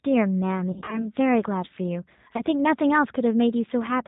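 From start to end the speech carries a G.729 codec sound, consistent with G.729A at 8 kbit/s. Each 10 ms frame is rebuilt from a vocal tract filter, a pitch predictor and a few pulses, so the voice sounds rough and slightly synthetic and nothing reaches above 4 kHz. Unlike a simple low-pass filter, the damage is plainly audible in the texture itself, a rough, synthetic quality rather than mere dullness.

From 0.72 to 1.09 s, VoIP packet loss concealed by the speech codec breaks up the sound. About 140 ms is missing across a 200 ms stretch in runs of up to 40 ms, which fits several lost 20 ms packets. The decoder fills each gap by extending its last pitch and filter at falling gain, so the speech smears into a fading buzzy tone or coloured noise instead of dropping to silence. Because each frame builds on the one before, it stays weak or distorted for a moment after the audio returns. A single short gap of the same kind, about 20 ms, lands between 2.37 and 2.42 s and is heard as a brief smear.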